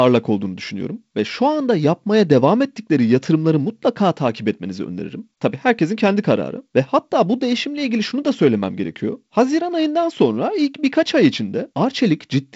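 No technical faults can be heard in this speech.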